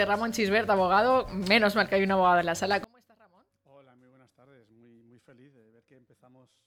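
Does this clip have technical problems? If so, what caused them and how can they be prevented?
Yes. From about 2.84 s right through to the end, the sound drops by about 33 dB and what's left is like a faint ghost of what came before. That's the classic signature of one channel inverted, which is the likely cause here: with one side's polarity flipped, everything common to both channels cancels when they're summed to mono, leaving only the small difference between them. To prevent it, check polarity on each channel and monitor a mono fold-down before bouncing.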